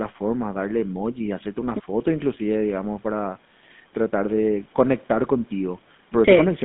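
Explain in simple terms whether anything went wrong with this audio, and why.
GSM full-rate codec, running from the very start to the very end of the speech. This is the compression used by early mobile phones. Rather than storing the sound itself, it sends a rough model of how the mouth and throat shape the voice, driven by a coarse train of pulses. That shortcut gives the speech a plainly audible buzzy, gravelly edge. The phone line also keeps only roughly 150 Hz to 3.6 kHz, so everything sounds thin and muffled.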